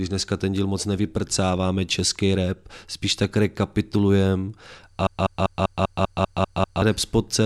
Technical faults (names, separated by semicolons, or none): broken-record loop